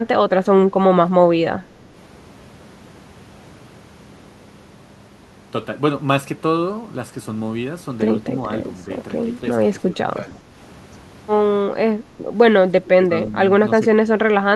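Speech suppressed in double talk hits at 8.84–8.9, 9.85–10.58, 12.04–12.13, 12.77–13.34 and 13.8–14.44 s. The voice dips slightly at first, then deeply. An echo canceller likely took it for loudspeaker echo while both sides spoke.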